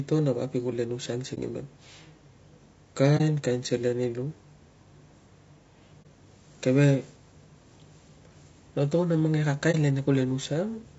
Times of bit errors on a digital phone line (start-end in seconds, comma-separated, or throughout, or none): none